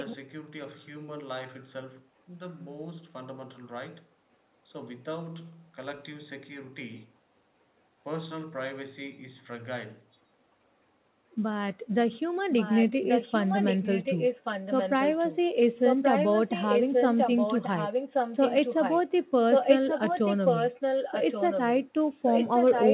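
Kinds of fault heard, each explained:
Echo leak: a copy of the speech returns about 1.13 s late, likely loudspeaker pickup the echo canceller left behind. It is faint at the very start, then, in stretches from 12.57 s onward, rises to roughly the level of the direct speech.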